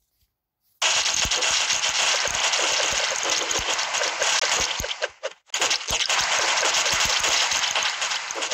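Two short dropouts interrupt the audio, at 4.40 to 4.42 s and 5.50 to 5.53 s, each a hard-edged hole of about 21 ms. Each is a block of digital silence, likely from the output buffer not being filled in time, which fits a 1024-sample buffer.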